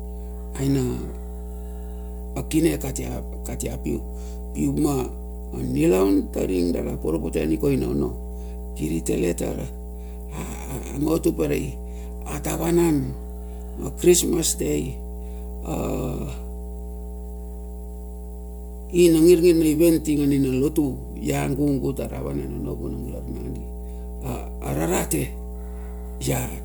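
From start to finish the speech sits on top of mains hum, a steady low tone at 60 Hz. Power-line current is leaking into the signal path, most plausibly through a ground loop between connected equipment or by induction from a nearby transformer. The hum is strong, roughly 10 dB below the speech, so it never drops out of earshot and fills every pause as a constant drone.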